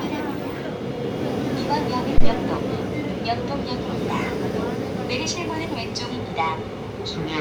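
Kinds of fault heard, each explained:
Phantom power thump: a supply voltage switched on or off a live input sends a sudden DC step through the coupling capacitors, heard here as a deep thump from 2.18 to 2.32 s that peaks at about -4 dBFS and dies away with a decay of roughly 32 ms. On the waveform it shows as a large one-sided excursion that settles back to zero; on a spectrogram it is a short burst of energy concentrated at the lowest frequencies.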